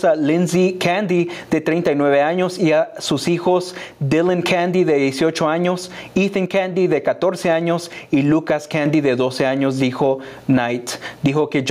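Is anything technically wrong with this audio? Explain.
Yes. Gain pumping runs throughout, with the gain swinging by around 15 dB, likely from excessive gain hitting a fast limiter. One channel drops out from 3.28 to 4.42 s and from 6.46 to 8.86 s; the level falls abruptly by about 6 dB, likely from a lost stereo channel in the mono sum.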